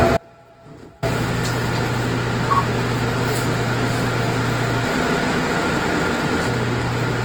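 Throughout, the sound carries plainly audible Opus compression in its music mode. The full bandwidth survives, yet tones come out rough, grainy and noisy. Starved bands are filled with folded or synthetic content. The damage points to a rate near 16 kbps.

From 0.17 to 1.03 s there is an audio dropout to a faint residue. For about 0.85 s the signal abruptly vanishes, leaving only a faint leak roughly 30 dB down. The likely cause is a broken feed whose downstream path stayed live.

From 4.85 to 6.47 s a doubled audio track appears. A second full-band copy, about as loud as the original, trails it by about 0.4 s. It has no decay or room colour, and it starts and stops abruptly. A likely cause is the same audio captured twice or two out-of-step copies left in an edit.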